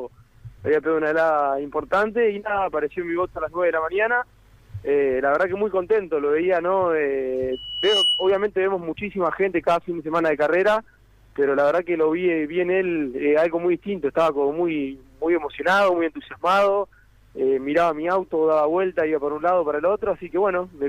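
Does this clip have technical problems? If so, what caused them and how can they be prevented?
Yes. A loudspeaker feedback squeal at 2.9 kHz runs from 7.52 to 8.46 s, swelling over about half a second to roughly 5 dB above the programme as mic-to-speaker loop gain exceeds one. Prevent it by lowering gain, repositioning the microphone, or notching 2.9 kHz.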